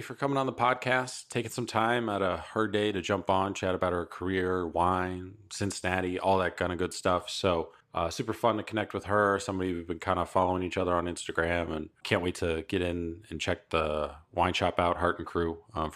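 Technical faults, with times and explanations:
Nothing technical gets in the way here; the speech just rolls along with no glitches to point at.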